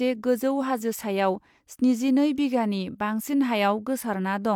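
A short speech recording with nothing technically wrong to report. No faults can be heard anywhere in it.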